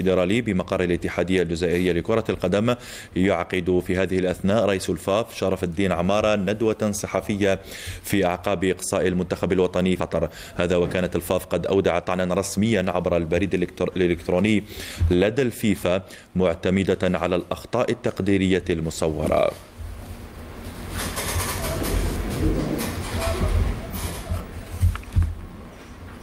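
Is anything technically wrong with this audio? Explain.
Yes, there are two faults around the ten-second mark.

At 9.99 to 10.01 s there is a skip ahead. About a second of audio was dropped, either in transit or by an overflowing jitter buffer, while later audio was already queued. Nothing fills the missing stretch, so playback jumps directly from the material before the cut to the material after it, with no audible silence. The joined edges sit almost back to back, and the transition sounds abrupt.

From 10.09 to 14.49 s there is a jitter buffer speed-up. The buffer was holding more audio than its target, so the receiver trimmed short pitch-period-length pieces repeatedly to reduce the excess delay. In total about half a second was removed, and playback runs at roughly 113% speed over those 4.4 seconds. Pitch stays the same, but the sound comes across as noticeably hurried.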